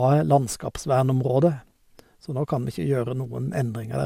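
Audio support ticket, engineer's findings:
Generation loss across the whole speech clip: swirly, hollow, smeared texture, transients blurred, worse than a single 128 kbit/s pass would give. Likely repeated MP2 re-encoding, around seven passes, each requantising on a shifted frame grid so noise accumulates. Spectrogram: hard ceiling near 16.7 kHz, smeared streaks between bands. Waveform: attack edges softened.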